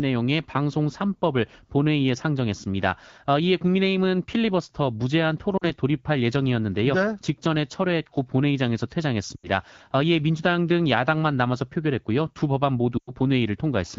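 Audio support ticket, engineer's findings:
Brief dropouts at 5.57–5.64 s (40 ms), 9.35–9.48 s (80 ms) and 12.98–13.11 s (100 ms), smeared then fading: lost AMR speech frames, decoder concealing with repeated parameters and falling gain.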